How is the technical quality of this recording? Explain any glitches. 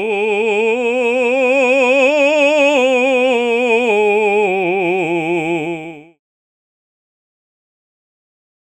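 No glitches can be heard in this music recording. A smooth fade-out begins at around 5.5 s and is complete by 6.2 s, easing the level down without any click or hard edge.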